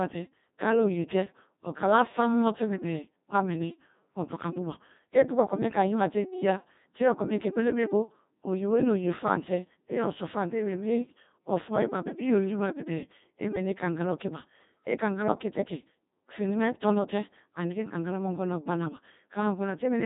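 Codec 2 vocoder damage runs through the whole clip. It is heavy, and the character fits a bitrate of around 2.4 kbit/s. Rather than keeping the waveform, the codec transmits only pitch, voicing decisions, energy and a coarse spectral envelope, and the decoder rebuilds the speech from summed sine waves. The result is robotic and buzzy, with a synthetic quality. Nothing survives above 3.8 kHz, so the top end is missing throughout.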